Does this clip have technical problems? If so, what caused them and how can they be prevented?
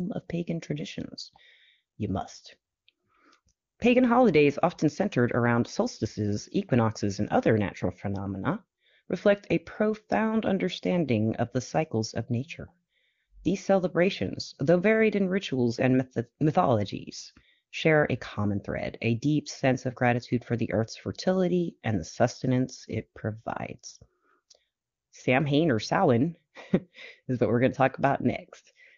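No, this clip has no technical problems.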